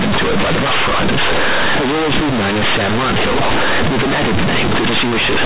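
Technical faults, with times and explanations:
Throughout, companded audio read as linear: mu-law bytes play as plain 8-bit samples, unexpanded, so each sign change swings half the range. Quiet speech turns loud and buzzy; the waveform is a dense near-full block, and spectrogram pauses fill with broadband noise.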